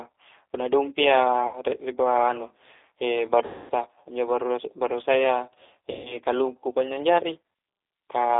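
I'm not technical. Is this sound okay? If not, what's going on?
No. A G.729 codec shapes the whole recording: this phone-call compression rebuilds speech from a rough model, so it sounds thin, slightly rough and synthetic, with nothing above about 3.7 kHz.

VoIP packet loss concealed by the speech codec hits at 1.47 to 1.61 s, 3.46 to 3.72 s and 5.91 to 6.18 s. Chunks of about 60, 240 and 140 ms went missing, so the decoder stretched the last sound into a fading buzzy tone or noise.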